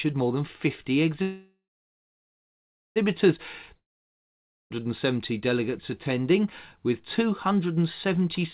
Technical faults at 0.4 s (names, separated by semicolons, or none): none